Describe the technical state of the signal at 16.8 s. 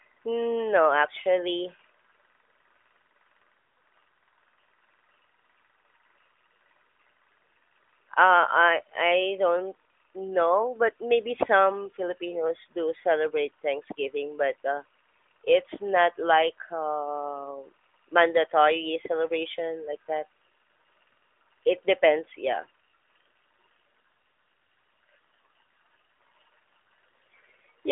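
At 16.8 s the signal is intact, with no fault at that moment beyond the ordinary narrowband character of the AMR mobile codec path carrying the speech.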